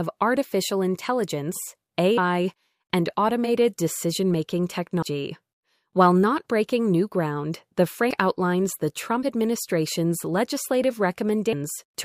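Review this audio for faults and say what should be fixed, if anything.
Compressed frames are skipped at 2.17, 5.02, 8.10, 9.22 and 11.52 s. At each point, whole blocks of coded audio never reach the output, so the sound jumps forward by roughly 100, 200, 300, 50 and 300 ms. Each frame is about 26 ms long. Unlike a dropout, no silence is inserted. To prevent this, verify file integrity after transfer and re-encode from an undamaged source.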